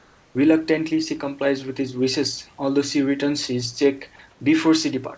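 From 0 to 0.35 s, and again from 4.31 to 4.40 s just after "she returns his cheque", the room background gives way to a steady, featureless hiss: comfort noise in place of the background, likely from discontinuous transmission filling pauses with synthetic noise. The first stretch sits about 2 dB lower, the second at the same level. Unlike a dropout or gate, the gap never falls to silence; only the background's texture goes flat, with everything band-limited to 8 kHz.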